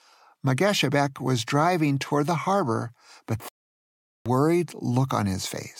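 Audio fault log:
3.49 to 4.26 s, playback stall: right after "harbor but", the speech cuts off mid-flow and the output stays silent for about 0.77 s before the sound returns. The likely cause is the player briefly having nothing to output, either because its incoming data ran dry or because its playback thread was held up, so it emitted silence until it recovered, then resumed either where it had stopped or, if the stream was live, further on.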